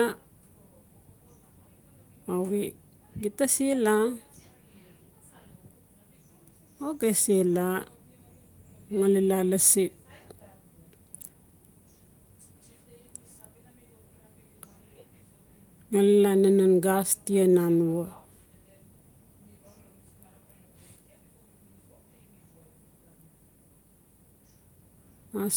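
No technical faults are audible in this speech. It carries full-band content up to about 20.1 kHz, with the light coding texture of hybrid Opus voice compression at a rate that sounds like around 24 kbps.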